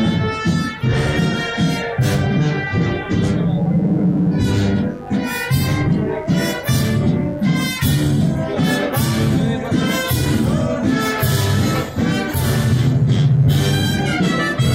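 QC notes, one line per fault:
Throughout: mains buzz, a steady, raspy buzz sitting under the sound for the whole clip, roughly 25 dB below it. The rasp comes from sharp switching spikes entering on the 50 Hz mains, twice per cycle, likely through a dimmer, a rectifier or a missing shield. Because the spikes are so abrupt, they spread energy across many harmonics of 50 Hz, reaching up into several kHz rather than staying a low hum.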